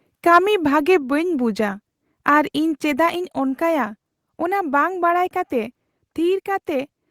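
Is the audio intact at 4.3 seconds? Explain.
Yes, at 4.3 seconds the speech plays through intact, with no dropout, click, distortion or other technical fault at that moment.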